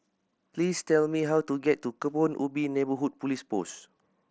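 No technical faults can be heard in this speech clip. It has come through a Bluetooth mSBC headset codec, so the sound stops at about 8 kHz and carries a light grain on louder passages.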